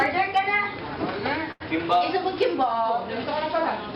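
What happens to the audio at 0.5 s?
Nothing goes wrong at 0.5 s; the audio plays through that moment intact, with no dropout, click or distortion.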